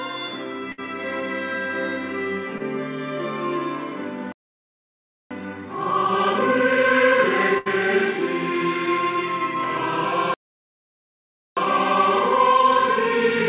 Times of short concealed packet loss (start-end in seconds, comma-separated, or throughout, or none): 2.58-2.62